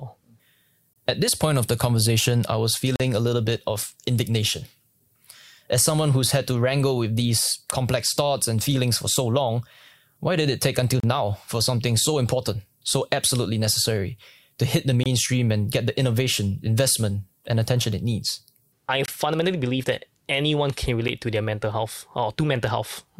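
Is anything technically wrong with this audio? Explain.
Yes. Gaps between stream segments cut brief silent holes into the speech at 0.93, 2.96, 11.00, 15.04, 19.06 and 21.08 s. Segment timestamps leave space on 2-second boundaries, and the player fills it with silence. Each hole is hard-edged and lasts about 10 to 40 ms.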